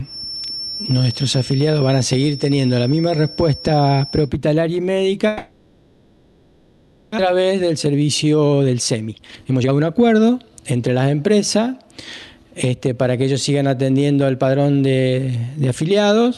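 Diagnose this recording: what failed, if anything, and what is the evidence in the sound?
From 0.0 to 4.32 s there is a feedback whistle. A thin steady tone near 5.4 kHz sits about 15 dB below the sound. It swells and fades slowly in level but never grows. The stage is acoustic, ahead of the call processing. The likely cause is a loudspeaker-to-microphone loop running just at the edge of oscillation. One frequency has enough loop gain to keep ringing. It does not have enough to run away.

From 5.27 to 7.20 s there is a long network dropout. The receiver fills the whole 1.91 s with concealment. The last sound is stretched into a fading buzz and hiss, with no true silence. When audio returns, about a second of material is gone. The stage is the network. The likely cause is packets stalling in transit. That pushed the playout delay up by roughly a second.

From 7.28 to 10.89 s the jitter buffer speeds up. 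The audio runs at about 123 % of normal speed with unchanged pitch. It sounds hurried. This is the buffer draining the backlog left by the dropout. It cuts out short pitch-period-sized pieces over and over. Around a second of audio is removed in total. The stage is the receiver's jitter buffer, behind the Opus decoder.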